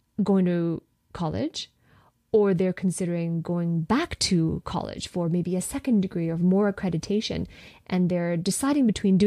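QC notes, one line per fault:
No faults heard in this speech recording.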